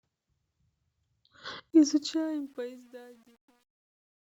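Speech with a fade-out from around 1.7 s: the fade stage drops to what sounds like 10-bit resolution without dither, causing truncation distortion from 1.70 s, worst from 2.41 to 4.26 s, where the tail turns gritty.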